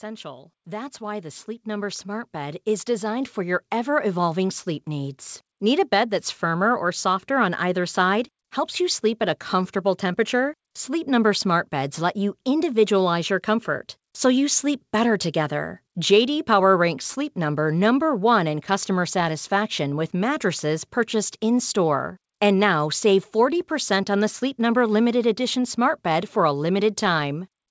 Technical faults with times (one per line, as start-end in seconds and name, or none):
0.05-7.90 automatic gain rising